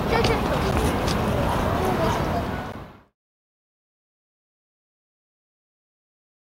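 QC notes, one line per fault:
0.71 s and 2.72 s, gap between stream segments: short hard-edged silent holes of about 8 ms and 13 ms where segment timestamps don't quite meet. The spacing fits one-second segments, and the second hole falls inside the fade-out.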